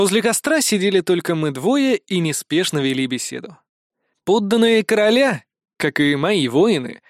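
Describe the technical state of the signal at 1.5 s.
The signal at 1.5 s is intact, with no audible fault at that point.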